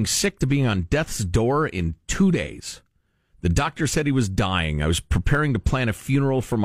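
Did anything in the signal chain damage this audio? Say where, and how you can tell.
Yes. There are dropped samples, likely at the driver or buffer. Sharp clicks at 4.25 s, after "doctor said he was", and 5.35 s. About 0.2 ms vanishes, so the waveform jumps.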